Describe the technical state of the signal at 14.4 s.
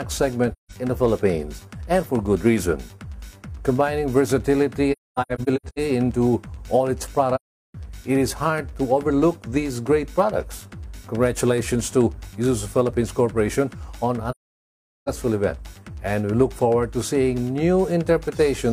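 At 14.4 s the sound drops into silence. The gap runs from about 14.30 s to 15.09 s, roughly 0.77 s, and it fades out and back in with soft edges. This is AAC frame loss with muting: a run of frames never reached the decoder, which filled their spectrum with zeros. The overlapping transform windows then tapered the sound into and out of the hole. A gap of that length fits about eighteen consecutive lost frames.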